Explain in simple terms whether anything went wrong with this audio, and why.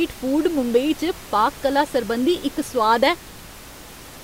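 Nothing went wrong with this speech recording. The faint background noise is simply the noise of the room the microphone was in, sitting well below the voice.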